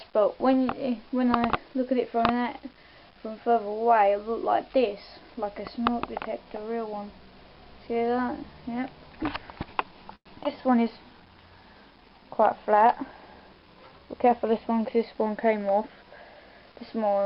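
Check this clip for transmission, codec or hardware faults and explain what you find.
The clip has transmission faults: a call audio freeze, two short concealed packet losses, a jitter buffer slow-down, a call bitrate drop that lasts to the end, and a jitter buffer speed-up.

From 10.15 to 10.28 s there is a call audio freeze. The likely cause is packets stalling in transit until the jitter buffer emptied. The receiver then extended the last sound for about 102 ms, and roughly 70 ms of that decays into silence before the audio resumes. Nothing is lost: the stream picks up where it stopped, so the event inserts a gap and pushes the timing back by 102 ms.

Short concealed packet loss follows at 10.42 to 10.44 s and again at 10.44 to 10.47 s. Here, chunks of about 40 ms and 20 ms never reached the decoder in time. The receiver patched over them by continuing the preceding sound and blending back into the real signal. 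Because that material is actually missing, the sound smears or wobbles briefly.

Between 10.51 and 10.71 s a jitter buffer slow-down occurs. With its reserve running low, the receiver built delay back up by repeating individual pitch periods or bits of pause over and over, adding 40 ms in total. Playback drops to about 85% speed with the pitch unchanged, so sounds in this stretch come out drawn out.

A call bitrate drop begins at 10.88 s and continues to the end of the clip. After the bandwidth estimate fell, the encoder went from 128 kbps to 28 kbps and stayed at the lowest rate for about 5.1 s. The coarser coding also cuts the audio band from 20 kHz down to 8 kHz. As a result the sound turns duller and rougher, and it never clears before the clip ends.

From 13.62 to 14.29 s there is a jitter buffer speed-up. The buffer was holding more audio than its target, so the receiver trimmed it by cutting out short pitch-period-sized pieces many times in succession, removing about a tenth of a second overall. 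The audio runs at about 113% speed at the same pitch, which makes this passage sound hurried.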